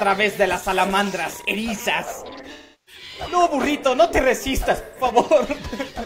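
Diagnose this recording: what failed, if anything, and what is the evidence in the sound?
AAC frame loss with concealment at 2.52 to 3.02 s and again at 4.83 to 5.02 s, a codec-stage fault. Each span has a smeared, noisy patch where the decoder was reconstructing missing frames from the last good spectrum. The first gap is about 340 ms and the second about 130 ms, which fits roughly eight and three lost frames respectively. Concealment reuses the previous frame's energy with scrambled or interpolated detail until valid frames return.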